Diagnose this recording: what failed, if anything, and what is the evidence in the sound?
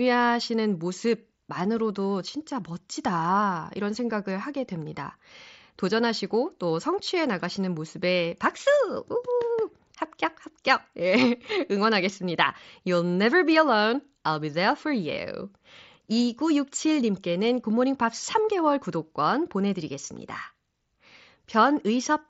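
Nothing here has actually failed: the speech comes across the Bluetooth mSBC headset link with just the light, grainy edge that wideband headset audio normally carries, and there's no sign of anything going wrong anywhere along the chain.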